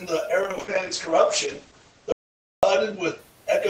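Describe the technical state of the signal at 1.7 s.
At 1.7 s we're in the middle of a call bitrate drop running 0.43 to 3.25 s. The encoder is starved, which fits a fall to around 10 kbps, so speech turns rough and muffled, with nothing above 8 kHz.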